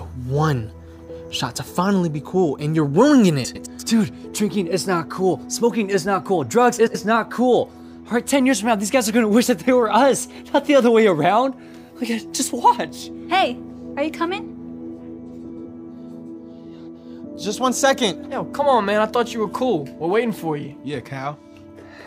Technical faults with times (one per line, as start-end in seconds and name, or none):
3.44-3.67 frames out of order
6.79-6.96 frames out of order
15.49-15.65 frames out of order